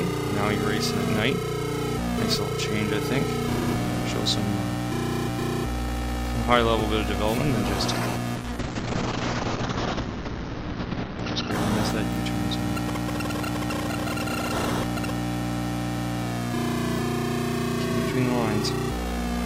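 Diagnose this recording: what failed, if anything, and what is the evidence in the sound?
A call bitrate drop at the codec stage, driven by the network's bandwidth estimate. From 8.37 s to 11.57 s the audio turns coarse and muffled, with the top end cut from about 20 kHz to 6 kHz. It stays at its worst for about 3.1 s before clarity returns. The encoder was told to spend far fewer bits, so it quantised coarsely and discarded the high band. The sound points to a fall from roughly 128 kbps to about 8 kbps.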